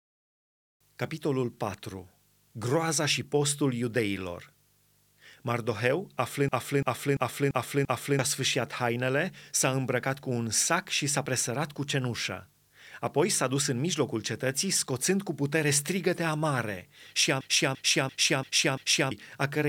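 Speech, with a system hang loop at 6.49–8.19 s and again at 17.41–19.12 s: a 341 ms chunk repeats five times at 2.93 Hz, a machine-gun stutter fitting a 16384-sample ring buffer replayed while the system froze, losing about a second and a half each time.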